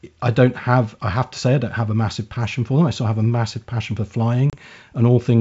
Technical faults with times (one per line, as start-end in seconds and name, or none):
4.50-4.56 packet loss on an ADPCM call